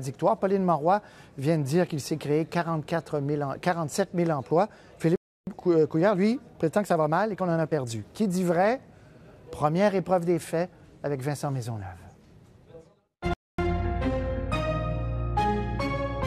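At 5.16 s the sound drops out for about 310 ms, until 5.47 s. That's a playback stall: most likely the player ran dry of data or its thread got held up, so the output just went quiet mid-flow. The same thing happens again at 13.34 s, a shorter gap of about 250 ms ending at 13.59 s.

Right after each stall you get time-compressed catch-up. The player trims its backlog by snipping out tiny slices and cross-fading over the joins, so the pitch stays put but everything feels rushed. After the first gap it runs about 1.1 times normal speed from 5.47 s to 8.47 s, a mild hurry over three seconds. After the second it's pushier, about 1.25 times, and over faster, from 13.59 s to 14.57 s.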